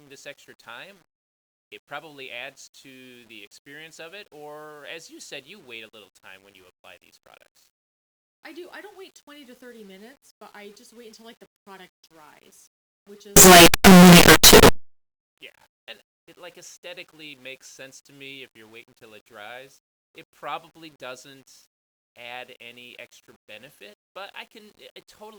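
From 13.36 to 14.69 s, just after "the product dries which", the 8-bit samples were likely read with signed and unsigned mixed up, flipping the top bit so every zero crossing leaps across the full range. The speech turns into very loud, harsh distortion, quiet moments as loud as the rest.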